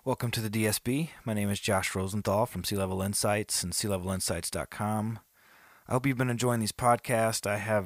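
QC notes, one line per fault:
Nothing to flag here; I couldn't hear a single technical problem anywhere in this speech recording.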